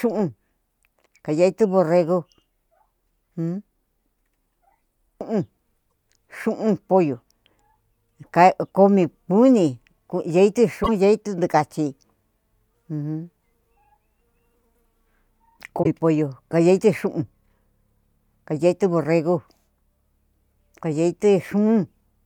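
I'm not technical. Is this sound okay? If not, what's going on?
No. Damaged data in a compressed stream at 5.87–5.89 s (just before "xu'un pollo"), 10.80–10.89 s and 15.79–15.86 s: corrupted bytes make the decoder lose its place, causing brief blips in the speech.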